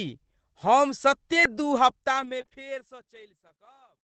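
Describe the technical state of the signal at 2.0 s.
At 2.0 s the audio sits inside a stretch of scattered short gaps, from 1.31 to 2.59 s. A few brief packets, none much over 20 ms, were lost or late. The receiver filled each hole by extending the preceding sound, leaving ticks and smears as the smooth fade-out continues.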